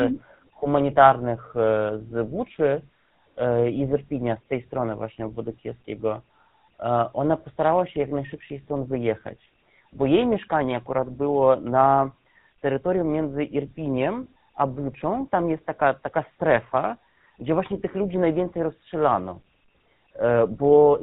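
GSM full-rate codec damage runs through the whole of this speech clip, from start to finish. The codec rebuilds speech from a vocal-tract filter excited by a sparse, evenly spaced pulse train, so the voice comes out plainly buzzy and gravelly, and nothing survives above 4 kHz, leaving a dull, band-limited telephone sound. The coarseness of the excitation fits a rate of around 13 kbps.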